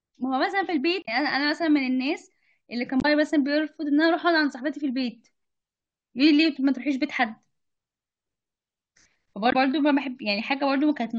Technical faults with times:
1.02-1.08 damaged data in a compressed stream
2.99-3.05 damaged data in a compressed stream
9.49-9.55 damaged data in a compressed stream

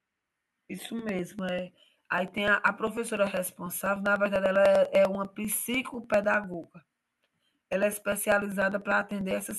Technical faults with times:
0.10-9.51 periodic USB or driver dropouts

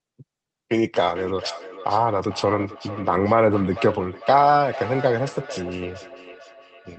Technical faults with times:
1.14-6.98 feedback echo between two devices

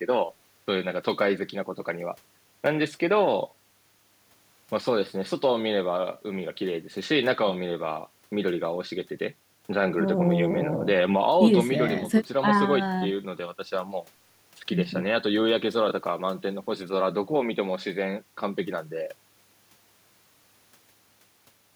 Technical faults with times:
none

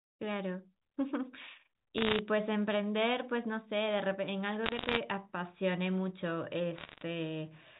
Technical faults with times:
1.98-2.19 bit errors on a digital phone line
4.64-4.98 bit errors on a digital phone line
6.78-7.03 bit errors on a digital phone line

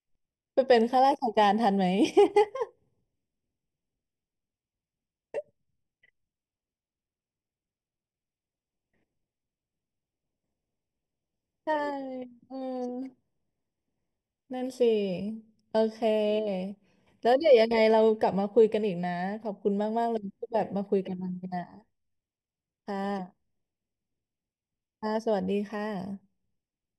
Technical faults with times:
0.00-26.99 channel delay (comb filtering)

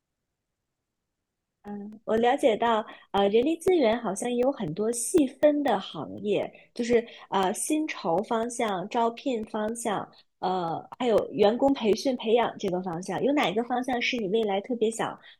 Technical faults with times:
0.17-15.19 periodic USB or driver dropouts

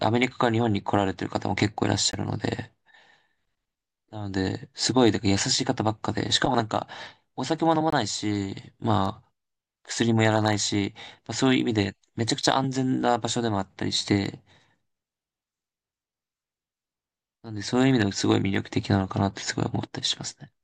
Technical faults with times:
2.11 block of digital silence
7.90-7.93 block of digital silence

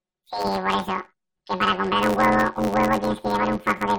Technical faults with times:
0.00-3.99 planar audio read as interleaved

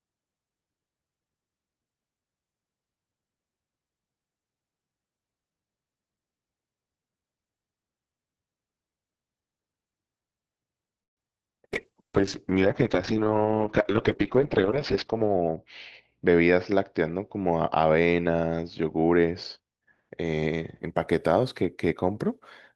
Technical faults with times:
11.03-11.41 repeated packet loss (robotic sound)
11.68-12.22 jitter buffer slow-down
11.74-20.86 call bitrate drop
14.35-15.51 jitter buffer speed-up

